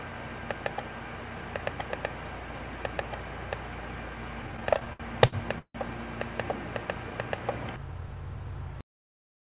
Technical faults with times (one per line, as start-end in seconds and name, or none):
4.42-5.76 repeated stalls (stutter)
8.81-9.55 cut-off end